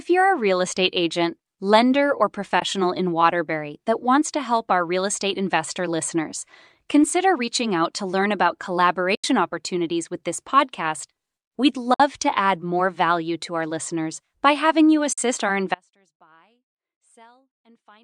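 AAC frame loss with muting leaves short soft-edged holes in the speech at 2.60–2.62 s after "estate agent lender or", 9.15–9.24 s, 11.94–12.00 s before "to add more value", and 15.13–15.18 s after "listeners by having you". These holes last about 20, 90, 60 and 50 ms, which fits whole frames of roughly 10 ms zeroed by the decoder. The overlapping windows taper each edge. A spectrogram shows brief vertical blank strips across all frequencies, and the waveform shows envelopes pinched smoothly to silence.

From 15.75 s to the end, an audio dropout to a faint residue cuts the speech off abruptly. Only a faint sound about 35 dB down remains, likely because the signal was lost while the path after the break stayed live. On a spectrogram, the energy collapses suddenly to a dim wash, and the waveform drops to a thin flat trace.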